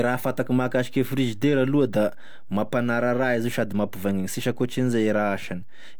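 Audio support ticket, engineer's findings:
DC offset, full length of speech clip. Waveform rides on a constant shift from zero; nothing audible in itself. Shows as steady energy at 0 Hz, bottom of spectrum, and eats headroom on one polarity. Probable component: capture front end or converter stage. Distinct from low-frequency hum or rumble: no pitch, no periodic component, no modulation, just a fixed displacement. High-pass or DC-blocking filter removes it.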